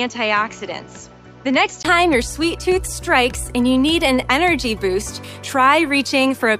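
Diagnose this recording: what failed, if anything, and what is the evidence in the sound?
The input stage likely switched capture devices. From the start until 1.85 s, the audio comes from a poorer input: nothing is present above 7.6 kHz, so the top end sounds dull and boxy, and a different background noise sits roughly 35 dB under the signal. At 1.85 s a brief 20 ms gap marks the input switched to a poorer device returning to the fuller path. The tone and noise floor change there, but the level barely moves.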